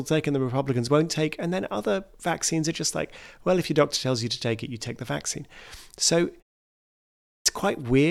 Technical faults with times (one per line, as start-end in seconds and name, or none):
6.89-7.46 clipped start after a pause